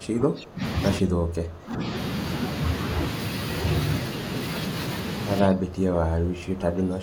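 At 0 to 0.64 s, 0.99 to 1.88 s and from 5.42 s on, the speech dips by about 20 dB, and by about 25 dB in the last stretch, visibly shrinking the waveform: likely speech suppressed in double talk by an echo canceller.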